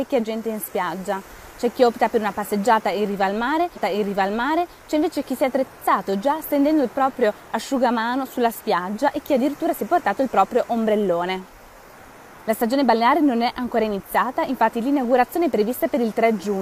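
A stream segment repeated: the player fetched or queued the same chunk of the stream twice, so one segment was handed to the decoder a second time. At 3.72 s the audio jumps back and replays material already heard, running until 4.69 s. That adds about 0.98 s to the programme and puts everything after it correspondingly late. A small blip marks the jump back, where the repeated material begins.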